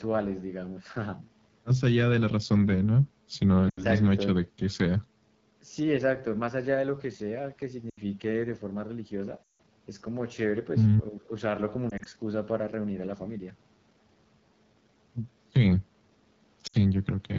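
Speech coded with the AMR wideband (HD Voice) codec at a low rate. The damage is plainly audible. The voice sounds rough and raspy, which fits the 8.85 kbit/s mode, one of the codec's lowest. At that rate the vocal tract model and pulse excitation leave too little detail. The top band, from 6.4 to 7 kHz, is filled with shaped noise, not real signal. There are also five bursts of lost AMR speech frames. They fall at 3.70 to 3.86 s, 7.89 to 7.99 s, 9.44 to 9.58 s, 11.90 to 12.08 s and 16.67 to 16.75 s. In each, the decoder repeats its last good pitch and filter settings at falling gain. In the longer runs the sound drops to near silence within two frames, as wideband concealment does. The gap at 9.44 s is the longest, about 160 ms of missing audio. At 11.90 s short losses are scattered over about 160 ms, giving brief warbles rather than one dropout. After each gap the voice returns weak or rough for a moment.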